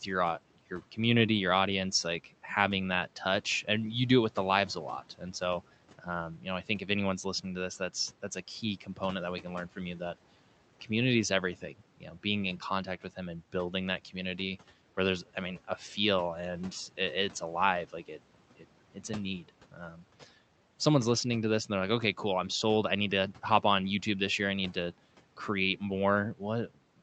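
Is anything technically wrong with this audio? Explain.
Yes. There is speech cut by the noise suppressor, twice: 8.81 to 9.0 s, after "that's that's a key", and 19.72 to 20.0 s, after "it's a need". The suppressor treated brief stretches of speech as noise and turned them down by about 10 dB. Those moments sound swallowed and faint.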